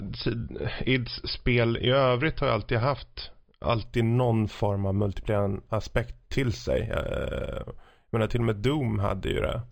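A speech clip with imaging from linear upsampling from 3.85 s to the end: 11 kHz audio raised to 48 kHz by straight-line interpolation leaves a mirrored copy of the band between 5.5 and 11 kHz, roughly 30 dB down, heard as faint metallic shimmer on sibilants, unlike aliasing, which folds tones downward.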